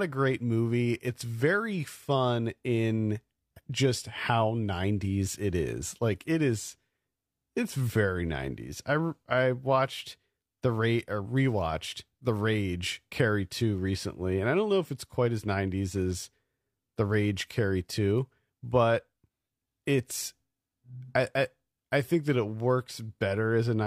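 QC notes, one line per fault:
Nothing to flag on this speech clip; no faults turned up anywhere in it.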